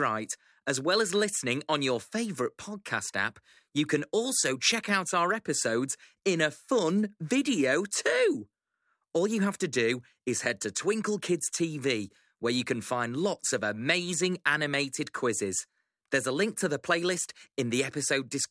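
No technical faults can be heard anywhere in the speech.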